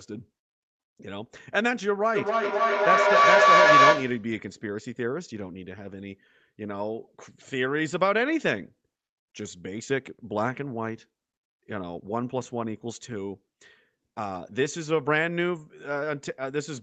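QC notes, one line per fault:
2.15–4.36 s, feedback howl: a tone near 1 kHz climbs out of the speech, pulsing roughly every third of a second and peaking about 9 dB above the talker. A second device in the room is feeding the loudspeaker back into the microphone with net gain, so each trip round the loop reinforces that frequency. On a spectrogram it is a bright horizontal line that thickens in regular beats under the 8 kHz call-band ceiling. The waveform shows a swelling envelope.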